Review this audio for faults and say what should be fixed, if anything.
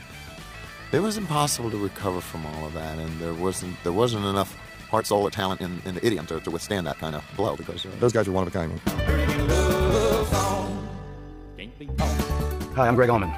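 From 4.30 s to the end at 13.37 s there's a time-stretched section: the pace jumps to about 1.89 times faster while the pitch holds, so it sounds rushed. That's likely software squeezing the audio to fit a length by dropping short slices. To prevent it, trim or re-edit the material to the target length rather than letting the tool compress it automatically.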